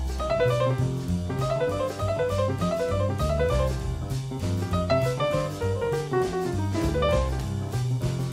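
No technical faults can be heard anywhere in the clip.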